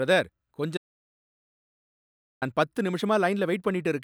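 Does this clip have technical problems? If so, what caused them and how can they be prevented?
Yes. The input feeding the recorder was likely lost for a moment, through a disconnected device, a failed link or a stray mute, while the recording carried on writing silence. The result is an audio dropout to silence from 0.77 s to 2.42 s. The speech cuts off abruptly, then about 1.64 s of dead silence follows with no room tone, and the speech resumes mid-flow with that stretch gone. Securing connections and monitoring input levels while recording prevents this.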